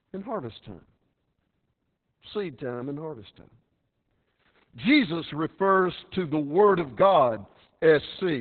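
Speech, heavily squashed by Opus voice compression throughout: nothing above about 4.4 kHz, so it's muffled and a bit hoarse and robotic, like a very low-bitrate SILK narrowband stream around 6 kbps.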